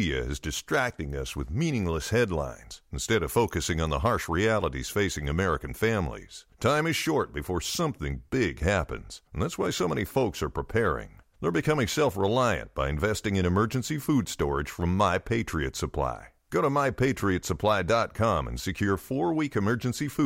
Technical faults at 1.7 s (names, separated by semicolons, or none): dropped samples